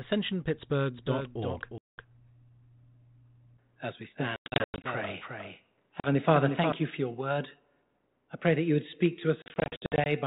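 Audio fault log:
0.94–6.72 s, doubled audio track: a second, full-band copy of the speech runs about 0.4 s behind the original and about 5 dB quieter, starting abruptly just before "you for your word". Unlike an echo or reverb, the copy has no decay tail and no room colour, and it starts and stops with hard edges. The likely cause is the same signal being captured twice, once through a slower path.
1.78–2.07 s, 4.36–4.86 s, 6.00–6.08 s, 9.42–10.07 s, packet loss on an ADPCM call: stretches of the call drop to hard-edged silence. These are a single 200 ms gap at 1.78 s, 320 ms of short gaps scattered across 4.36–4.86 s (the longest 100 ms), a brief 40 ms hole at 6.00 s, and 320 ms scattered over 9.42–10.07 s right after "that you would speak" (the longest 60 ms). A plain dropout would resume cleanly. Here the narrowband speech, limited below 4 kHz by the 32 kbit/s G.726 link, comes back slightly distorted. 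That happens because the decoder's adaptive predictor and step size lose step with the sender during each gap. They resync within some tens of milliseconds.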